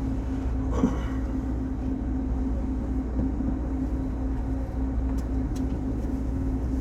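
At 4.69 to 4.74 s there is a short stutter from repeated frames: a 52.2 ms block of compressed audio, which fits two frames, was played one extra time, so the decoder repeats that slice and the sound lengthens by 52.2 ms. The same fault returns at 6.36 to 6.47 s, where a 52.2 ms block plays twice more, giving a longer double stutter and adding 104.5 ms.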